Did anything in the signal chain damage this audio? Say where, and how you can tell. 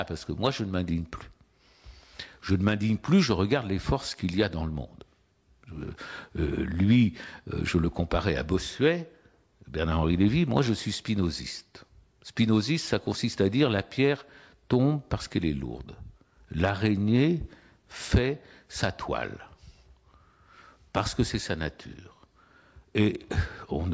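No, nothing in the chain damaged it.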